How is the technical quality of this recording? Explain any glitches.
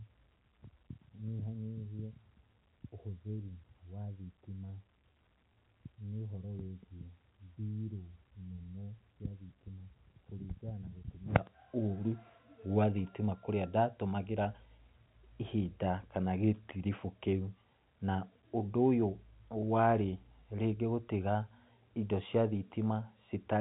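No glitches can be heard in the speech. It has the narrow band of G.711 telephone coding, with nothing above 3.9 kHz.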